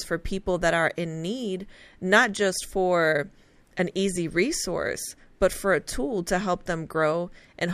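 Nothing in this speech recording sounds like a technical fault, so there's nothing to flag here.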